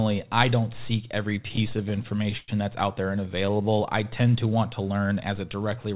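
Between 1.3 and 2.5 s, just after "I don't seek", packets reached the receiver late and unevenly, so its jitter buffer kept running dry. The result is repeated stalls (stutter): many brief holds, the longest about 104 ms, where the last sound is stretched out. Nothing drops out, but the speech jerks and drags until "that's out there and".

From 3.28 to 4.27 s, after "that's out there and" and up to "to want to learn", a jitter buffer slow-down builds up reserve by repeating single pitch periods. About 106 ms is added, so the speech runs at roughly 90% speed with unchanged pitch and sounds drawn out.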